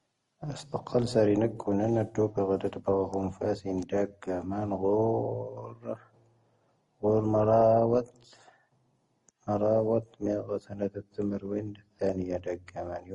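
From start to finish the speech likely went through transcoding between lossy codecs, first a low-rate Opus-style encode and then MP3 at a modest bitrate. Nothing remains above 11.1 kHz, and a smeared, warbly texture mixes with crunchy, swirling MP3 artefacts.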